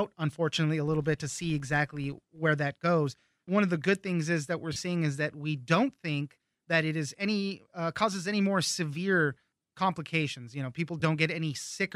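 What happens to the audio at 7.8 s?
Nothing goes wrong at 7.8 s; the speech carries on intact through that moment, with only the light, even coding of the lossy compression that runs through the whole clip.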